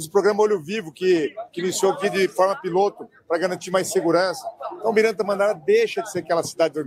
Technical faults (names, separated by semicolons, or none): none